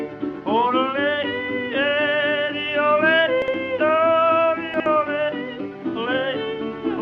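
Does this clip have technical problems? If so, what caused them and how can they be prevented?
Yes, there are two spots where chunks come out of order, at 3.42 to 3.54 s and again at 4.74 to 4.86 s. Each time, a 60 ms piece of audio turns up one chunk late and plays after the piece that should follow it. Nothing is actually missing, but the order is swapped, so you get a brief jumbled stutter with three hard joins. To prevent it, put a sequence-aware jitter buffer in front of the writer so late chunks get slotted back into place.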